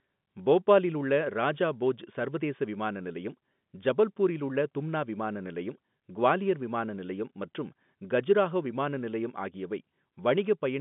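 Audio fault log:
No faults heard.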